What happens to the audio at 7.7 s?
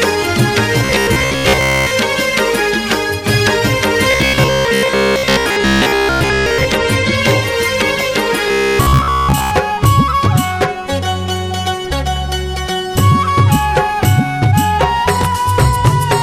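Nothing goes wrong at 7.7 s; the audio plays through that moment intact, with no dropout, click or other audible fault.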